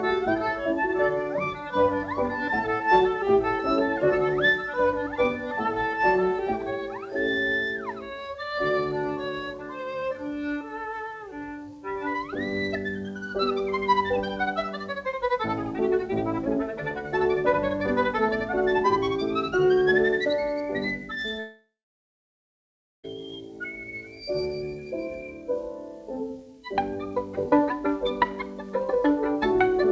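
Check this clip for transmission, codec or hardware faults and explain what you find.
One transmission fault is present, heard over a call path whose band limit leaves nothing above 8 kHz, consistent with G.722. From 21.40 to 23.06 s there is a long network dropout, likely from packets that never arrived. The receiver stretches the last sound into a short, decaying buzz, followed by about 1.34 s of near silence. Audio then resumes with roughly 1.64 s of material missing.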